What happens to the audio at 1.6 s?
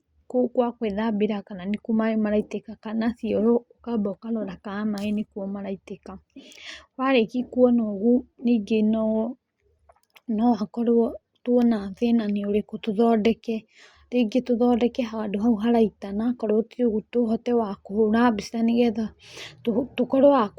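Nothing goes wrong at 1.6 s; the speech carries on intact through that moment, with no dropout, click or distortion.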